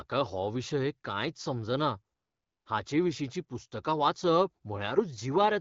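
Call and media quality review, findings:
AMR comfort noise, 2.15–2.65 s: real background replaced for 0.5 s by steady, smooth synthetic noise, switching in and out at the edges. Sender judged silence, stopped speech frames; receiver generated noise from coarse level/spectrum description.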